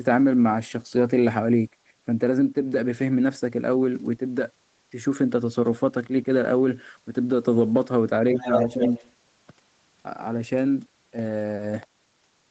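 From 8.33 to 9.12 s a second voice comes through alongside the talker, only slightly quieter than the main speech. This is the other side's voice leaking through, most likely because the far end was playing on the talker's loudspeaker and the echo canceller left part of that playback in the microphone signal. It sounds band-limited like the rest of the call audio, which has nothing above about 8 kHz.

Inside that same stretch, the talker's own voice dips twice: a deep, short dip from 8.37 to 8.49 s and a shallower one from 8.75 to 8.83 s. This is speech suppressed in double talk. With both sides active at once, the echo canceller likely could not tell the talker apart from the echo and pulled the level down on both, so the near voice briefly ducks while the leaked voice is present.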